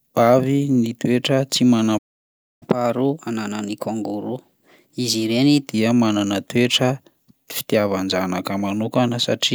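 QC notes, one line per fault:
1.98–2.63 s, playback stall: the speech cuts off mid-flow and the output falls to silence for about 0.63 s before resuming. A gap this long most likely comes from the player running dry of buffered data or having its audio thread blocked, so nothing reaches the output until it recovers. On the waveform this is a flat near-silent band with abrupt edges on both sides, and the spectrogram shows a clean vertical blank column across all frequencies.
2.63–5.63 s, catch-up at higher speed: right after the gap the speech runs at 1.1 times normal speed for three seconds, then settles back. The player is resampling its backlog to win back the lost time, so tempo and pitch rise together, by roughly a semitone and a half, which makes the voice sound slightly hurried and higher. On the spectrogram the harmonic lines sit visibly higher and syllable blobs are compressed horizontally, dropping back to normal spacing at 5.63 s.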